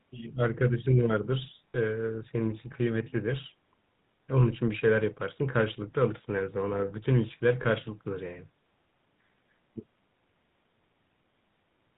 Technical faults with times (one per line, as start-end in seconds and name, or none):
0.00-11.97 GSM full-rate codec
1.71-1.75 lost GSM frames
7.62-7.66 lost GSM frames